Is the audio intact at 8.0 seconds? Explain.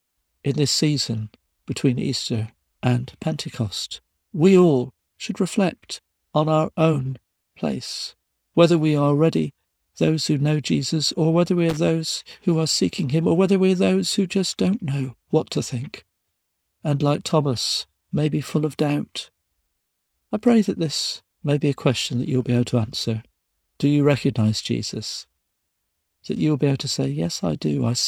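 Yes, the speech at 8.0 seconds is intact, with no fault at that moment.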